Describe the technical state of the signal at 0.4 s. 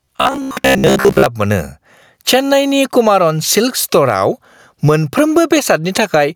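At 0.4 s the speech is inside a stretch of robotic sound from repeated short buffers that runs from about 0.02 s to 1.26 s. The voice has become a rigid, metallic buzz pitched at 66.8 Hz, which fits a buffer of roughly 15 ms being replayed. The likely cause is new audio arriving too seldom, so the last short block is looped to fill the gap. Most of the real signal in this stretch, around two thirds or more, is skipped, and what remains only loosely tracks the speech.

Gain pumping is also present at this moment and through the whole clip. The level swings by around 10 dB. The likely cause is input gain set far too high, with a fast limiter or compressor pulling it back on every peak. This flattens the difference between loud and soft passages and leaves the sound squashed.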